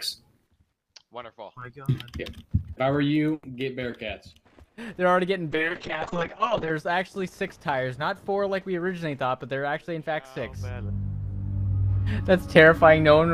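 From 5.53 to 6.77 s, a call bitrate drop makes the sound coarse and muffled. The highs shrink from 20 kHz to 8 kHz, and the roughness suggests the encoder falling from about 64 kbps to roughly 6 kbps. It stays at its worst for about 1.2 s before recovering.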